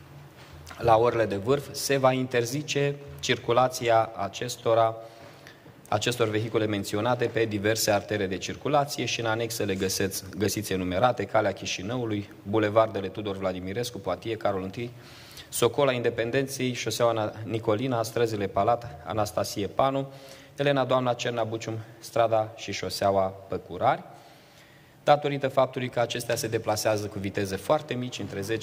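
There are no technical faults to describe, so there is nothing to set out in time order.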